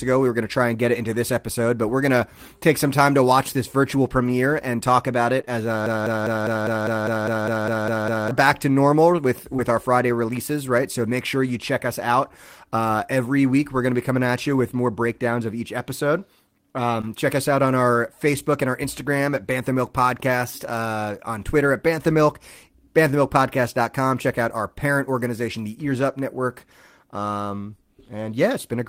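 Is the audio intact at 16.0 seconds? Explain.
Yes, the speech at 16.0 seconds plays through intact, with no dropout, click, distortion or other fault at that moment.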